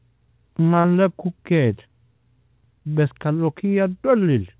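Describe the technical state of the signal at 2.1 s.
At 2.1 s the speech is intact, with no fault, only the narrow band of the call path, which has nothing above 4 kHz, consistent with G.711 mu-law coding.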